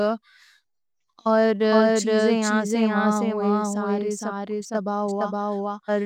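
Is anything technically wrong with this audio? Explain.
Yes. Throughout the speech, a doubled audio track: an equally loud, dry copy trails about half a second behind, likely from an out-of-step second capture path. Waveform and spectrogram show every shape repeated at that fixed offset.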